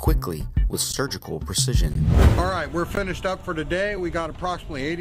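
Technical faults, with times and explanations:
0.92 s, 1.94 s, 2.95 s: gap between stream segments. Timestamps on consecutive 1.0 s segments leave 12 to 17 ms unfilled, so hard-edged silent holes interrupt the sound each second.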